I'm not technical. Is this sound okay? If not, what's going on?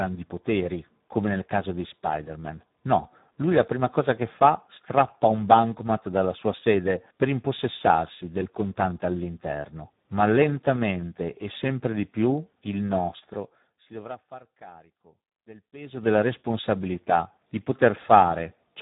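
No. The speech was squeezed through the Speex codec, an older speech compressor from internet calling and game chat, at a setting that leaves it very little detail to work with. It rebuilds the voice from a rough sketch, so from start to finish the speech sounds heavily damaged: hoarse and noisy. Everything above about 3.8 kHz is gone, which makes it dull and muffled, like a poor phone line.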